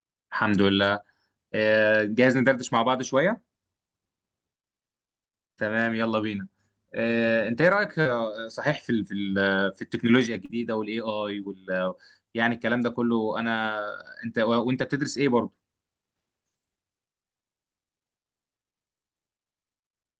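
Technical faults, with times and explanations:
0.97 to 0.99 s, 5.85 s, 7.11 s, 8.05 to 8.11 s, 10.49 to 10.51 s, 11.43 to 11.45 s and 14.75 to 14.81 s: lost packet rebuilt from error correction. Packets went missing, but the next packet carried a low-bitrate copy. The decoder played that copy instead. There is no gap. Each 20 or 40 ms patch sounds briefly rougher and noisier.
8.01 to 8.07 s and 10.45 to 10.51 s: short concealed packet loss. About 40 ms of speech arrived too late each time. The receiver extended the preceding sound to cover the hole, then blended back. This gives a brief smear or wobble. Both spots run straight into rebuilt packets.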